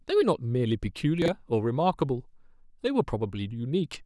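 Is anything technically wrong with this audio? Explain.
Yes. Chunks out of order at 1.22 to 1.28 s: a 20 ms chunk played two chunks late, so the speech briefly jumbles, with three hard joins.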